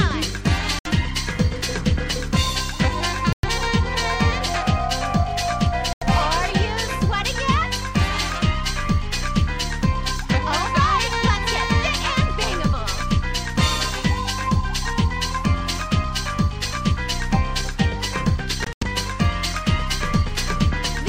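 Short silences with abrupt edges cut the audio at 0.79–0.87 s, 3.33–3.45 s and 5.93–6.03 s, then two broken gaps between 18.64 and 18.83 s, the longest about 85 ms. The sound resumes further along each time, likely a Bluetooth dropout where late packets were discarded.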